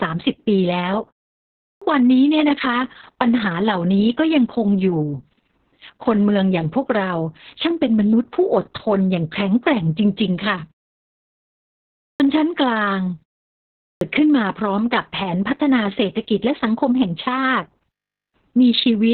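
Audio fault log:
throughout: Opus voice compression. The speech sounds muffled, hoarse and faintly robotic, with nothing above about 4.4 kHz. The coder has fallen back to narrowband linear-prediction coding with a coarse excitation, which fits SILK at around 6 kbps with long 60 ms frames.
1.72 s, 12.09 s, 13.91 s: clipped start after a pause. Speech bursts in abruptly after silences of 0.68 s, 1.44 s and 0.74 s, missing its first 95 ms, 108 ms and 102 ms. The output device dozed in each pause and was still waking, swallowing each onset.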